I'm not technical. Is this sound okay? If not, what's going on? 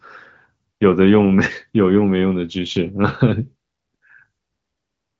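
Yes, this sound is okay, and nothing is going wrong with it.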